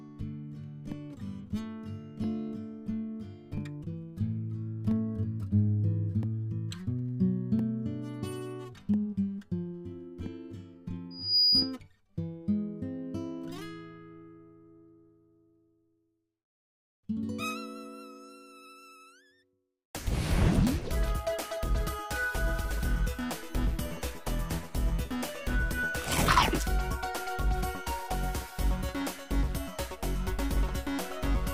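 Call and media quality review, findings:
Loudspeaker feedback squeal, 11.10 to 11.75 s. Single tone at 4.9 kHz swells over about a third of a second, peaking about 10 dB above the programme. Probable component: open mic near its own speaker. Loop gain exceeds one at that frequency.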